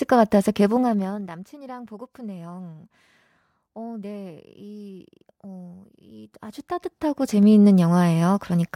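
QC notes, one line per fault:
0.64–1.37 s: zipper noise. The level drops by about 20 dB in hard 2 dB steps, around twenty a second. Nothing smooths each jump, so every step leaves a small click, and the clicks form a fast ticking over the speech.
6.13–7.53 s: zipper noise. The level comes back up by about 20 dB, again in 2 dB steps, now roughly ten a second. The slower steps make a coarser, more separate ticking while the level rises.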